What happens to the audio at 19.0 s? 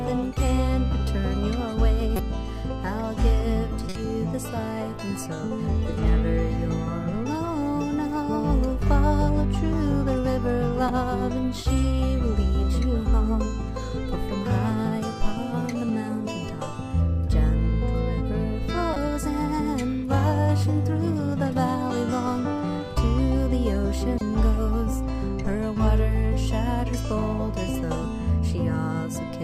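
Just before 19.0 s, from 18.94 to 18.96 s, a corrupt frame is decoded: damaged bits across a few compressed frames misplace energy in frequency, producing a short, fairly loud burst of misplaced sound, heard as a chirp, squeak, blip or burst of noise.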